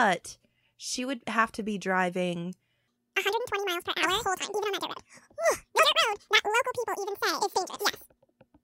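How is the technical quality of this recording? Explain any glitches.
The recording has one significant fault: a section at the wrong speed. From 2.88 s, just after "have to be driving", through to the end of the clip, the speech plays at twice its recorded speed. Speed and pitch rise together, so the voice jumps up by something like ten semitones and sounds high and hurried, with syllables crowding together. The likely cause is that this stretch was played back or edited against the wrong clock rate.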